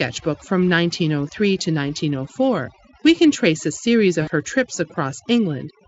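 Throughout the speech, overdone noise removal is audible: the suppressor pulls individual frequency bands down or out whenever they sit near its noise estimate. The background breaks into twinkling, warbling specks. On a spectrogram this shows as scattered isolated dots and gaps between harmonics.

From 4.21 to 4.30 s, between "can trace a series" and "her trips", there is VoIP packet loss concealed by the speech codec. About 60 ms of packets went missing, which fits three 20 ms frames. The Speex decoder, heard here at roughly 34 kbps, extended its last pitch and filter at falling gain. The gap sounds like a stretched buzzy tone or coloured noise that fades, and the voice stays weakened as real packets resume. On a spectrogram the harmonics flatten into a smeared, decaying band. On the waveform the envelope drops smoothly instead of following syllables.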